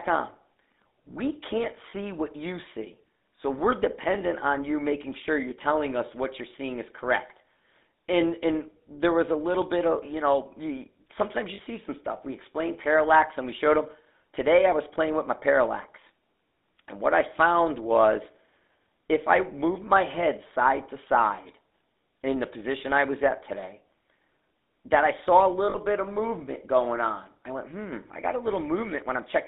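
From start to finish the speech carries the GSM full-rate codec's plainly audible damage: a buzzy, gravelly roughness, as the vocal tract is modelled and driven by a sparse, regularly spaced pulse excitation, which fits 13 kbps full-rate coding. On a spectrogram, energy sits between about 200 Hz and 3.7 kHz with nothing above, and harmonics look smeared and grainy rather than cleanly striped.

Lost GSM frames break in at 1.90 to 1.93 s, 5.50 to 5.53 s, 11.54 to 11.60 s and 25.70 to 25.77 s. Each time the decoder reuses the last good frame's settings, so the sound briefly freezes into a rough, metallic ring. The first two point to a single 20 ms frame and the last two to about 40 ms. In the waveform these show as short stretches of repeated texture, and on a spectrogram as flat, smeared bands where formant movement stops.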